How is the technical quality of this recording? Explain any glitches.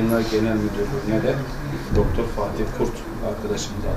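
No technical glitches can be heard anywhere in the recording.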